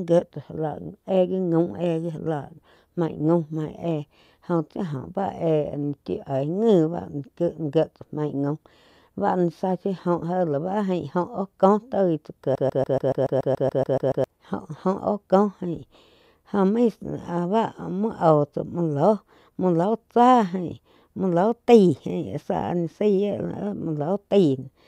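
At 12.55 s the speech snags into a broken-record loop: a 142 ms scrap repeats back to back twelve times until 14.24 s, like a stutter. Likely the player or stream stalled and kept replaying its last fragment, so whatever belonged there is gone.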